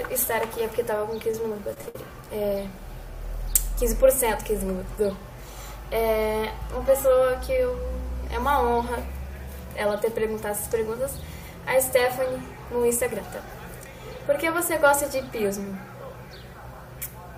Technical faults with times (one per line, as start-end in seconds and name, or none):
1.31-1.96 repeated stalls (stutter)